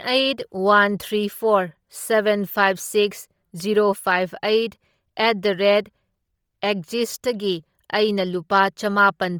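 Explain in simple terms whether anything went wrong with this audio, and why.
From start to finish the speech sounds breathy and grainy, with the discarded treble filled in by noise. This heavy damage likely comes from Bluetooth LC3 compression.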